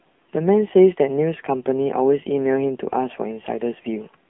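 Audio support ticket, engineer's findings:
AMR narrowband mobile codec, whole clip. Speech band-limited, nothing above 3.7 kHz, line band about 150 Hz to 3.5 kHz. Buzzy, synthetic vocal tract modelling, plainly audible. Sparse pulse excitation points to a low mode, roughly 7.4 kbps.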